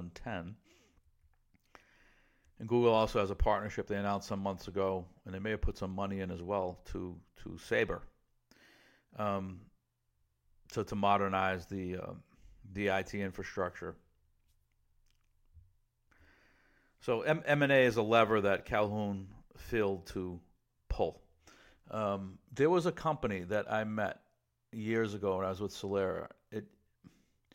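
No technical faults can be heard anywhere in the recording.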